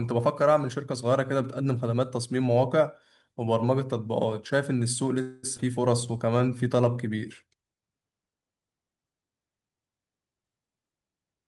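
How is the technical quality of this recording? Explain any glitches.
The speech is marred by three closely spaced network glitches between about 5.2 and 6.8 s.

From 5.21 to 5.45 s there is a call audio freeze: the sound stalls and its last moment is stretched into a fading buzz for about 217 ms, with no true silence. When the sound resumes it carries on exactly where it stopped, so nothing is lost. The likely cause is packets held up in transit, leaving the jitter buffer empty while the receiver filled the wait.

At 5.57 to 5.60 s the audio skips ahead. Roughly a tenth of a second of speech vanishes, and the two sides are butted together with only a tiny 12 ms join, so the speech lurches forward abruptly. Later audio was already queued, and a stretch was dropped either in transit or by the jitter buffer discarding it to catch up.

From 6.07 to 6.83 s a jitter buffer slow-down makes the speech drag. 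It runs at about 88% speed at unchanged pitch, so sounds are drawn out, sometimes with a faint warble. Running low on buffered audio, the receiver repeated single pitch periods many times over to build a reserve, adding about 100 ms of length.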